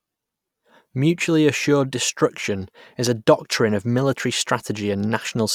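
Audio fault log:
3.07–3.10 s loud pop: a single sharp pop rises a few decibels above the speech, likely a sudden voltage pulse from a switch or static, while speech continues underneath.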